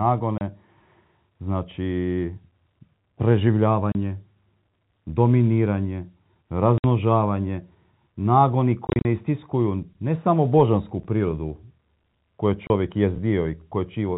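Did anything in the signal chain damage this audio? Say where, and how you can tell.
Yes. Packet loss filled with silence, a network fault, cuts the speech at 0.38, 3.92, 6.78, 8.87–9.05 (short scattered holes just before "istiskuju ne samo božansku") and 12.67 s. The gaps have hard edges and run 30 or 60 ms, which fits lost 10 ms packets replaced by zeros.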